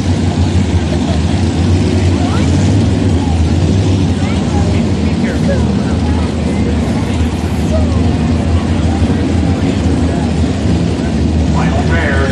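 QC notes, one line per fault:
No faults detected on this pass.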